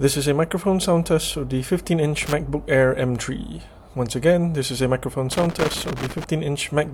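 At 2.18 s a short burst of loose connector crackle starts, lasting to 2.33 s. A longer one runs from 5.32 to 6.24 s. A worn contact is making and breaking. The signal chops in and out, with irregular scratchy crackle.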